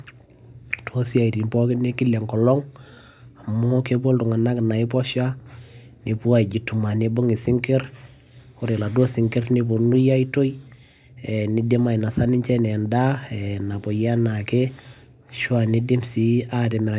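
No technical faults can be heard anywhere in the speech.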